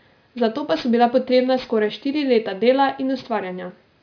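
Aliasing runs through the whole clip. Content above 5.5 kHz folds back below it instead of being filtered out, which fits a drop to an 11 kHz rate. Sibilants turn gritty and metallic. A spectrogram shows energy running hard up to 5.5 kHz, with mirrored streaks roughly 25 dB down.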